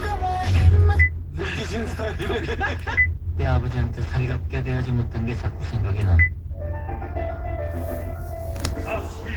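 All the way through, this everyday sound carries the smeared, watery texture of a very low-bitrate encode, even though the file is a roomy MP3 with nothing above 20 kHz. It's likely low-bitrate audio saved at a high bitrate, something like 16 kbit/s Opus re-encoded at 256 kbit/s, so the damage was baked in before the bigger file existed.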